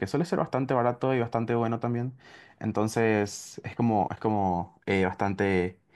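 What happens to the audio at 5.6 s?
At 5.6 s the audio is intact, with no audible fault at that moment.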